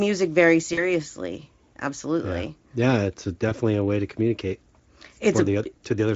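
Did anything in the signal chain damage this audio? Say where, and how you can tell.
Yes, at the network stage: VoIP packet loss concealed by the speech codec. Around 40 ms of packets vanished at 0.73 s and 20 ms at 3.49 s. The decoder extrapolated the last frame with falling gain, so the speech there smears into a fading buzzy tone or coloured noise that stays weak until 0.83 s and 3.53 s.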